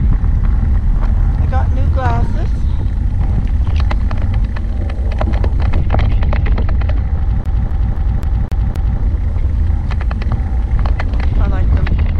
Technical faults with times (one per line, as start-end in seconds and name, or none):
7.44-9.00 CD stuck on one turn